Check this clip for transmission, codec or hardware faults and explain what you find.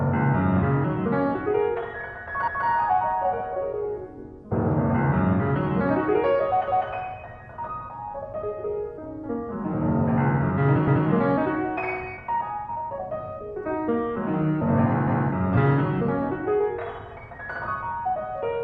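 One fault is present. Overlapping chunks at 2.48, 6.68, 10.88 and 15.08 s: each 4 s chunk restarts 200 ms early, replaying that slice, heard as regular stutters.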